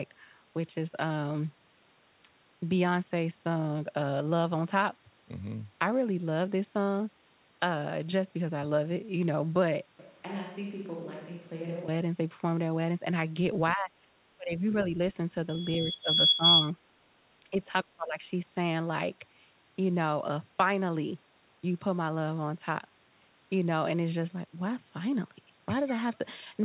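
From 9.99 to 11.88 s the speech suddenly turns roomy and hollow, about 5 dB quieter with more room noise. That's likely a switch to a distant microphone.

Then there are dips at 13.73–14.13, 14.37–14.73, 15.83–16.18, 16.34–16.44, 17.51–17.56 and 17.84–18.24 s, dropping by up to about 30 dB. That's likely speech suppressed in double talk, with the echo canceller ducking the talker.

Overlapping those, from 15.49 to 16.71 s, a loudspeaker feedback squeal at 3.4 kHz builds over roughly a second to about 10 dB above the speech, with the mic-to-speaker loop running away.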